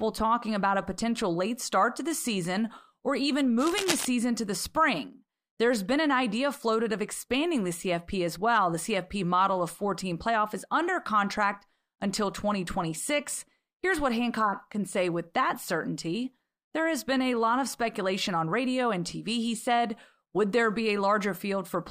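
From 3.58 to 4.05 s, between "the season or even" and "to the spring", cable scratch noise rasps over the speech a little below its level, likely from a worn connector shifting. Spectrograms show ragged broadband vertical streaks; the waveform shows dense, irregular spikes.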